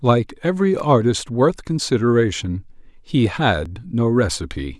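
At 0.80 s, 2.43 s and 3.66 s the speech catches on a repeated buffer: the playback device ran short of fresh audio and replayed its last block. The repeated piece is very short, which fits a 5 ms buffer, so each repeat is a tiny click or buzz rather than a stutter. The first one repeats twice and is slightly longer. In the waveform, identical short segments sit side by side with hard joins, and the spectrogram shows a thin vertical line at each join.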